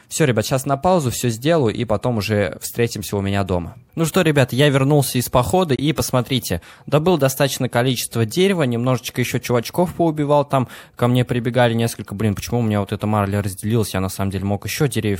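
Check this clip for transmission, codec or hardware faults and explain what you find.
One fault stands out, a Bluetooth dropout. From 5.76 to 5.80 s the sound cuts to silence. The gap lasts a few tens of milliseconds. About 23 ms of audio is missing, which fits a single lost frame. When the sound returns, it picks up later in time, as if it had kept playing. The likely cause is a packet that reached the headphones too late and was discarded.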